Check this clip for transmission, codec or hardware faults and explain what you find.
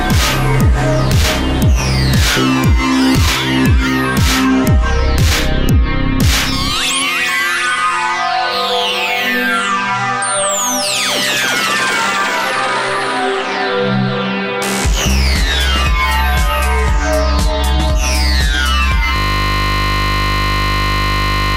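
One hardware-side fault appears near the end. From 19.16 s to the end, a system hang loop: the machine froze while the audio device kept replaying one 20 ms stretch of its buffer, so the sound collapses into a steady 50 Hz buzz that never recovers.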